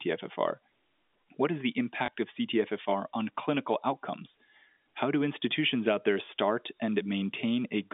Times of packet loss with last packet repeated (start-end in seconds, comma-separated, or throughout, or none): 2.06-2.08, 6.26-6.28